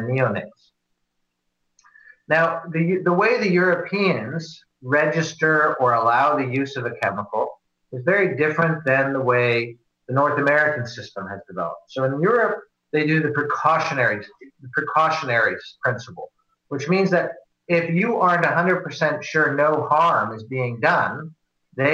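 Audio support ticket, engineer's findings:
No faults found on listening; nothing in the audio calls for a fix, so this one can be closed.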